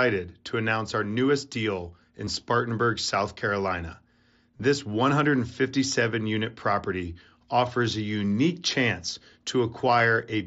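A speech clip with concealed Bluetooth headset packet loss at 2.25–2.27 s, just after "our newest deal in", at 4.57–4.60 s, and briefly at 9.99 s. The first two gaps are filled by repeating the last stretch of waveform, so a short buzzy tone holds at full level with a slight warble as real speech resumes, rather than the silence or click of a plain dropout; the single lost frame at 9.99 s is nearly hidden. The band-limited, wideband headset sound of the mSBC codec is audible throughout.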